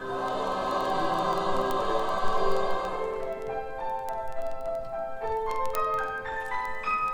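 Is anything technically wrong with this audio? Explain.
Yes, there are word clock ticks running from 0.14 s right through to 7.13 s. The receiving device clearly isn't locked to the sender's clock. With a mismatch of a few hundred parts per million, the two clocks slip past each other roughly every 50 ms. Each slip drops or repeats a single sample and garbles a few around it. So you get a steady train of around 150 sharp ticks, about twenty a second, varying in strength from one to the next.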